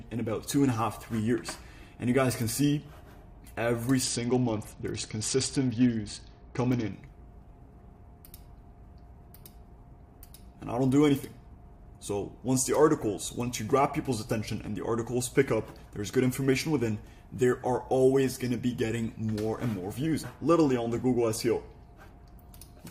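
A Bluetooth SBC bit pool drop hits the audio from 4.03 to 6.93 s. The treble goes dull and a gritty noise rises. This fits the bit pool falling from 28 to 8, near 72 kbps, on a congested link. Full bandwidth returns afterwards.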